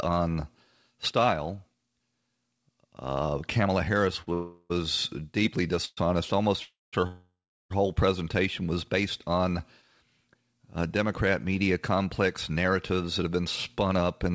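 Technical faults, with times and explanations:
4.22–4.29 s, short stall from a late packet: a packet arrived late and the jitter buffer briefly ran dry, so the last sound is held for about 48 ms with a faint buzz or dip before the audio resumes where it stopped. Nothing is lost, but the timing slips by that amount.
4.33–4.72 s, 5.85–5.99 s, 6.63–6.95 s and 7.07–7.72 s, call audio freeze: the last sound is stretched into a fading buzz or hiss lasting 370, 118, 298 and 637 ms, ending in silence of 10, 30, 190 and 370 ms. The audio then picks up again with nothing missing. The likely cause is packets held up in transit, emptying the jitter buffer each time.
12.49–14.31 s, jitter buffer speed-up: the audio runs about 8% fast at unchanged pitch and sounds hurried. After the stalls, the buffer held more audio than its target, so the receiver trimmed short pitch-period slices in succession, roughly 150 ms in total, to reduce the delay.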